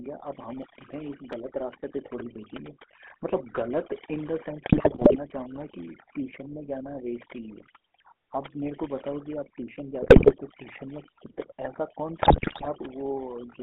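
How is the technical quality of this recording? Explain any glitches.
The recording has poor technical quality, with heavy processing throughout and three short bursts of breakup.

The background drops and breaks up into twinkling, warbling specks. This is overdone noise removal. The filter was set so aggressively that it shut down individual frequency bands near its noise estimate, taking the quieter parts of the speech with them.

Throughout, the sound is buzzy and gravelly, confined to roughly 250 Hz to 3.5 kHz with no highs. This points to the GSM full-rate codec at about 13 kbps. It models the vocal tract and drives it with a sparse, regularly spaced pulse excitation, and that coarse approximation produces the roughness.

From 4.66 to 5.16 s, 10.02 to 10.33 s and 12.22 to 12.67 s, the speech breaks into squawks, pops and gargling, worst in the last burst. These are GSM bit errors. 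Corrupted filter, pitch and gain values reached the decoder, so the spectrum bent and the level jumped frame by frame.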